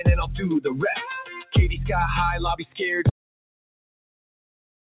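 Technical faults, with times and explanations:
Throughout: noise suppressor applied to music or sounds. A speech-oriented suppressor stays active on material it was not built for. It treats steady parts and decaying tails as noise and pulls them down, while sharp onsets pass more freely. The level swings by about 5 dB as the suppressor clamps and releases. The result is a pumping, fluttering sound that seems thinner than it should, heard through a call path that tops out at 4 kHz.
1.30–1.56 s: sound cut by the noise suppressor. Here the suppressor misjudges a stretch of sound as noise and cuts it harder than elsewhere. The deepest drop is about 11 dB, and roughly 0.3 s is affected in all. Sustained or fading content sinks, and its decay is clipped short. Any abrupt attack within the stretch survives better. The dip is audible as a brief sag in level.
3.09 s to the end: audio dropout to silence. 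The sound stops mid-flow and never returns. The gap is silent, with no room tone or background left underneath. That points to the input being lost while the recording carried on writing silence. A disconnected device, a failed link or an accidental mute is the likely cause. Whatever followed in the final stretch is simply absent.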